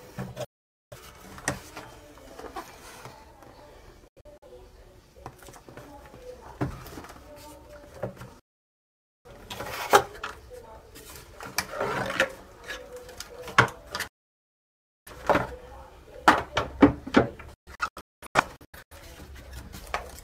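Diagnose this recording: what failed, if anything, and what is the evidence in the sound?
The sound abruptly fades to silence within about 3 ms and returns later, missing material, at 0.45–0.97, 4.08–4.46 (short scattered holes), 8.39–9.29, 14.08–15.11 and 17.54–18.96 s (broken holes, longest run about 0.21 s). This is digital broadcast dropout: at the reception stage, failed or missing frames were muted until clean frames resumed.

A click or stutter at 18.81 s comes from overlapping chunks. In the buffer or transport stage, audio handled in 4.0 s chunks started each chunk slightly early, so about 6.5 ms of sound plays twice at the join.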